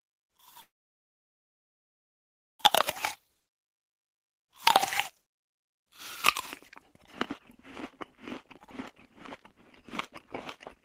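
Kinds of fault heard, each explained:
Call audio freeze: the sound halts at 0.61 s and holds nearly 2 seconds, with about 1.94 s of near silence that shows as a flat waveform and an empty spectrogram. This likely comes from delayed packets draining the jitter buffer, since playback resumes intact at 2.62 s, shifted later.
Jitter buffer speed-up: short pitch-period pieces are cut repeatedly so the sound hurries at unchanged pitch, at about 108% from 2.84 to 4.76 s, 124% from 5.21 to 5.92 s, and 111% from 7.94 to 10.83 s. Spectrogram harmonics keep their spacing while events crowd closer in time.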